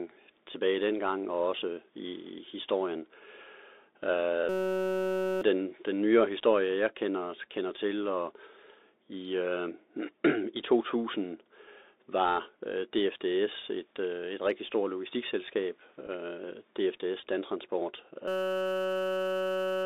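Throughout, the sound carries the Bluetooth CVSD headset codec. Only a 300 Hz to 3.7 kHz band survives. The 64 kbps one-bit coder can't track fast loud rises, so sibilants turn scratchy. A grainy hiss sits beneath everything. The damage is plainly audible.

From 4.49 to 5.41 s comes a system hang loop. The machine stalled while the hardware replayed one 5.33 ms slice, which fits a 256-sample buffer. It repeats at 188 Hz and sounds like a steady buzz. About a second of audio is lost.

At 16.07 to 16.09 s, a Bluetooth headset packet repeated. Lost packets were filled by decoding the previous one again. About 7.5 ms of sound is replaced, heard as a brief rough buzz. At 17.21 s, a second one covers about 15 ms.

A second system hang loop runs from 18.28 s to the end. A 5.33 ms slice loops at 188 Hz as a continuous buzz. Roughly 1.5 s of audio is gone.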